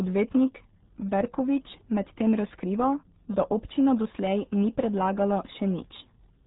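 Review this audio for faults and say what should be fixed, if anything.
The speech carries RealAudio 14.4 codec damage throughout. Nothing above 3.8 kHz gets through, so it sounds muffled and boxy. Heavy coding adds a gargly, watery texture to the voice. That fits a low-rate dial-up speech codec near 8 kbit/s. To prevent it, re-encode from the original source with a modern wideband codec at a higher bitrate.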